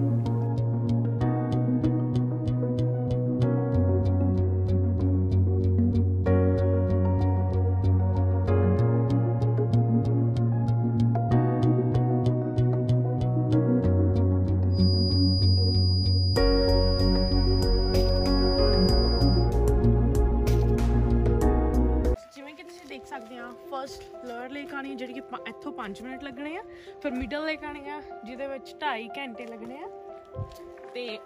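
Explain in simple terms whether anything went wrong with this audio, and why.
From 14.69 to 19.52 seconds, a thin, steady high-pitched whistle, at about 4.9 kHz, sits behind the sound. It stays somewhat quieter than the main audio and swells and fades slowly in loudness before it stops. This is a feedback whistle, likely caused by sound from a loudspeaker reaching the microphone and being amplified again, round and round, with the loop balanced just on the edge so that one tone keeps ringing without growing louder.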